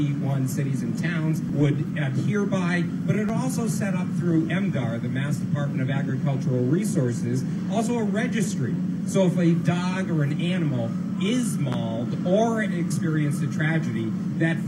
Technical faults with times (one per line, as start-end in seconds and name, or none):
3.29-3.32 loud pop
11.72-11.76 loud pop